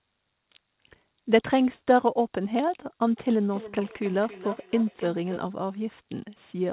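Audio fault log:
3.5 to 5.47 s, feedback echo between two devices: each word returns roughly every third of a second, fainter and thinner, peaking about 15 dB below speech, as a second device replays it.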